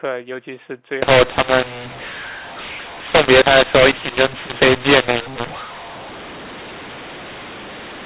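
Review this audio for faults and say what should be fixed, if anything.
From 1.02 s to 8.06 s, the speech turns harsh and pauses fill with noise. This is a mu-law and A-law mix-up. Mu-law samples are decoded as A-law, scrambling levels. To prevent it, carry the G.711 law with the stream and confirm the decoder uses the same one.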